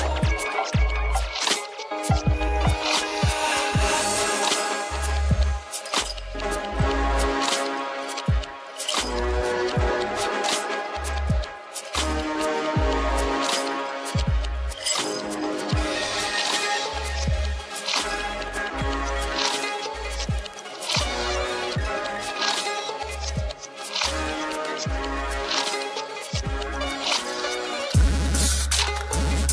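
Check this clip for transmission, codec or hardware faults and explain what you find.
Nothing here points to a transmission, codec or hardware problem; the audio sounds steady and intact all the way through.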